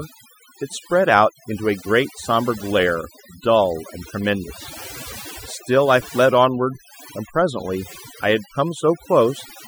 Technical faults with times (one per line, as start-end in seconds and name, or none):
0.00-9.67 overdone noise removal